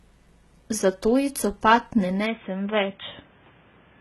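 From the start, the speech carries heavy HE-AAC compression damage, likely from that codec. The encoder keeps only the lower spectrum and synthesises the treble by copying lower bands upward. A coarse envelope shapes those copies. The rebuilt top is not the original, so its harmonics do not line up with those below. Nothing is present above 11.8 kHz. The damage points to a low bitrate, around 16 kbps.

At 2.26 s the input switched to a poorer device, likely a different microphone or a headset call profile. From there to the end, nothing remains above 3.8 kHz. The speech turns dull and boxy at once. There is no gap at the switch. The level stays roughly the same. A new noise floor appears, roughly 35 dB below the signal.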